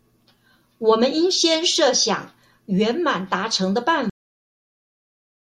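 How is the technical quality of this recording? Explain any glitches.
The recording has one glitch, a cut-off end. At 4.10 s the speech stops mid-sound: the final buffers were never written, so the waveform drops straight to flat digital silence, with no decay on the spectrogram.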